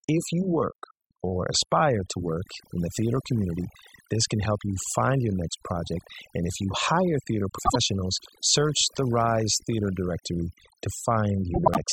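Noise reduction set far too aggressively runs through the whole recording. Individual frequency bands are pulled down or switched off whenever they dip close to the tool's noise estimate, so the softer parts of the speech are removed along with the noise. The background sinks and fragments into twinkling, warbling specks. This overdone noise removal is present from the first second to the last.

From 3.42 to 4.95 s, just after "work in the theater" and ending before "your next project", a GSM phone buzz appears. A nearby 2G handset in an active call transmits in bursts about 217 times a second, and the audio circuitry rectifies those radio pulses into the signal path. The result is a hard, raspy buzz at 217 Hz carrying many harmonics, sitting about 29 dB below the speech. It holds nearly steady and bears no relation to what is being said.

Two instances of frames out of order follow. In each, two adjacent runs of frames reached the decoder swapped and were played in that wrong sequence, so a short stretch sounds with its two halves exchanged. 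The first, from 7.58 to 7.76 s just after "if you hire theater", swaps two 72 ms blocks, which fits runs of three frames each. The second, from 11.54 to 11.78 s, swaps two 96 ms blocks, consistent with four frames each. Both come across as a brief garbled flutter, and no time is lost.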